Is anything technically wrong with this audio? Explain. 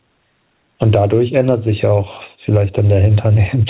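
Yes. Gain pumping runs through the whole clip, with the level swinging by around 10 dB. The likely cause is microphone gain set far too high, with a fast limiter pulling down every peak. Loud and soft parts sit close together, so the speech sounds squashed. Nothing comes through above 4 kHz, which fits a 64 kbps G.711 A-law call codec.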